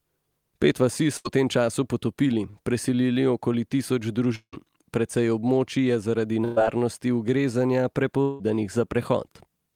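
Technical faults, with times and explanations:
1.17–1.27 s and 6.44–6.58 s, burst of packet loss: several consecutive packets failed to arrive in time, taking out about 80 ms of speech in the first event and about 120 ms in the second. The decoder extended the last received sound for 73 ms and 118 ms respectively, lowering its level as it went. That produces a brief held buzz or fading hiss, after which the speech resumes with the intervening portion gone.
2.51–2.55 s, short concealed packet loss: roughly 20 ms of audio did not reach the decoder, which synthesised 27 ms of replacement by continuing the preceding signal, pitched if voiced and noise-shaped if not, then crossfaded back into the real stream. The result is a short smear or wobble rather than a gap, and a brief consonant at this point can drop out entirely.
4.35–4.54 s and 8.22–8.41 s, long network dropout: about 180 ms of speech is missing at each point, most likely because the network delivered nothing for that stretch. 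Concealment continued the last sound for about 170 ms as a decaying buzz or hiss. At 4.35 s this gives way to about 90 ms of silence before the speech returns. At 8.22 s there is no silent section, and the fading fill runs straight into the resumed audio. In both cases the speech picks up later in the utterance, without the lost portion.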